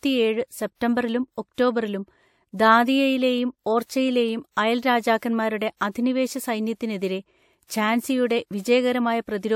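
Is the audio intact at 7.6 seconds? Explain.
No. At 7.6 s, as throughout the speech, stacked warbly smearing fits likely transcoding between lossy codecs (AAC then WMA). The spectrogram shows the lower band cut-off surviving, plus speckled holes.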